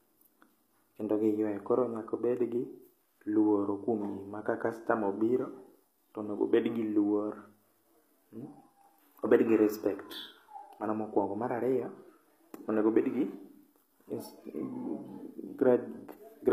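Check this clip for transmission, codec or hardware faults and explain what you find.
One codec fault is present. HE-AAC compression runs throughout: the treble is likely rebuilt by spectral band replication, copying lower bands upward under a coarse envelope, which fits a bitrate around 24 kbps. Harmonics misalign across the crossover, s sounds turn gritty and metallic, and nothing survives above 14.9 kHz.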